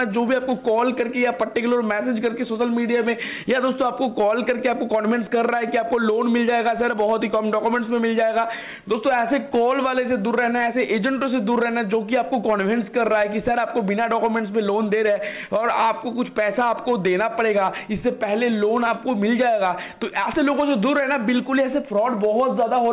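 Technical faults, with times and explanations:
Nothing stood out on listening beyond the narrow, telephone-like band of the call path, with nothing heard above about 4 kHz.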